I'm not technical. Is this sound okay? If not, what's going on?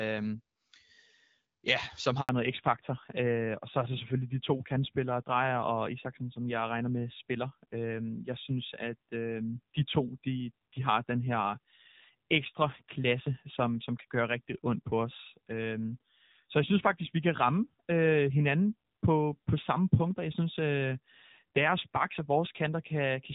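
No. Just after "ja som", at about 2.21 seconds, the speech cuts out completely for 80 milliseconds and comes back at 2.29 seconds. This is a handover gap: the phone was switching the call from one network to another, and nothing got through during the switch. Unlike a crackle or a stutter, the sound simply fades out quickly and leaves true silence, and whatever was said in that moment is gone for good.

From 2.29 seconds to the end, the speech sounds duller and rougher than before. This is a fallback to narrowband: after the switch, the call dropped from HD Voice to an older, lower-quality phone format, and everything above 4 kHz is now missing. Unlike a muffled microphone, this change happens all at once, right at the handover. Before it, the first two seconds have the fuller, clearer HD Voice sound.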